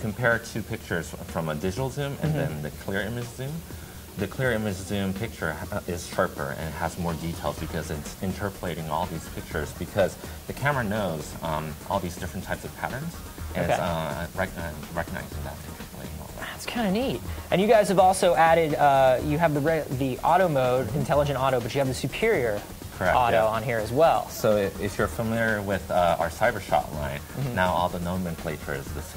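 A constant, even hiss sits about 20 dB below the sound throughout, free of distortion: low bit depth with dither, consistent with roughly 7-bit resolution.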